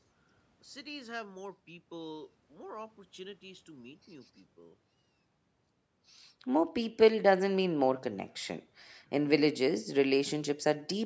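No technical faults are audible.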